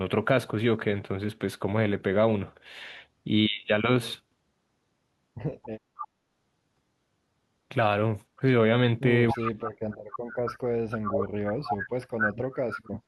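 At 5.96 to 6.07 s a faint echo leak comes through, a copy of the speech about 275 ms late and well below it. The likely cause is a far-end loudspeaker echo that the canceller failed to remove. On a spectrogram it shows as a weak, delayed repeat of the preceding harmonic pattern. From 9.32 s to the end, the speech is suppressed in double talk: the level drops in uneven pieces, at worst by about 40 dB, and the top end thins out. The waveform shows chopped, collapsing envelopes and the spectrogram loses high-frequency energy in patches, likely because the canceller muted the talker along with the echo. Within that stretch, echo leaks recur at 9.35 to 9.51 s and 11.68 to 11.76 s, at the same 275 ms delay and each louder than the first, the second nearly as strong as the speech. They appear as brief, smeared duplicate bands.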